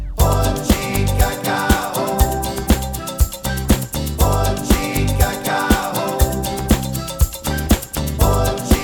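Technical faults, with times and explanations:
Nothing stood out on listening to this recording.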